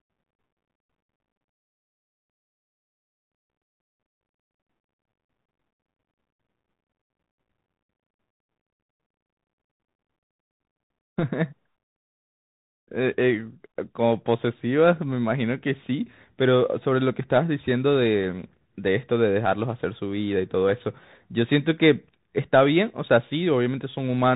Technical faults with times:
0.00-24.36 Bluetooth CVSD headset codec

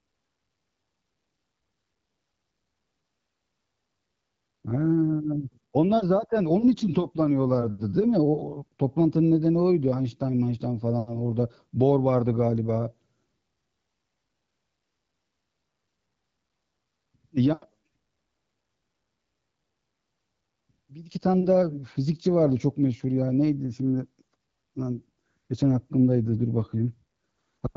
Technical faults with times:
none

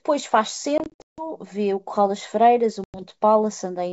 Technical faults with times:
0.78-1.25 packet loss on an ADPCM call
2.84-3.02 packet loss on an ADPCM call

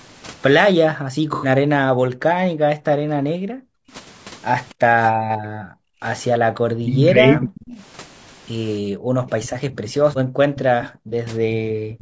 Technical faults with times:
0.00-12.02 low-delay AAC compression
0.91-6.45 background gated by the echo canceller
1.34-1.49 AAC frame loss with concealment
2.12-2.55 speech suppressed in double talk
5.22-7.64 speech suppressed in double talk
7.67-12.02 echo leak
8.78-11.72 background gated by the echo canceller
9.72-12.02 speech suppressed in double talk
11.09-11.13 AAC frame loss with concealment

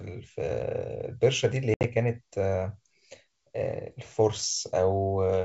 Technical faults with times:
1.74-1.85 packet loss on an ADPCM call

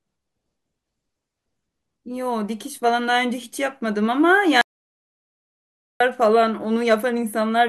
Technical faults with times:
4.61-6.00 audio dropout to silence

